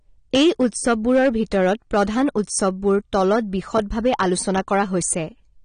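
Speech, and two problems run the whole way through. Hard clipping: the level is pushed about 6 dB past full scale, so a small share of peaks get flattened, giving a crackly edge on loud syllables. The sound is also dull and smeared with a fizzy, warbly texture, and nothing survives above 9.7 kHz. That points to AAC compression, likely AAC-LC at a low bitrate around 32 kbps.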